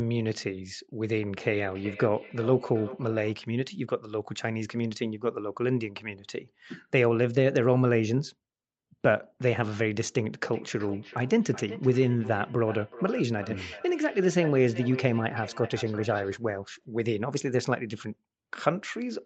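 Speech with feedback echo between two devices from 1.17 to 3.38 s and from 10.42 to 16.41 s. Each word returns roughly every 0.4 s, up to about 15 dB below the speech, thinner with each pass, as a second device replays it into a microphone whose canceller cannot remove it.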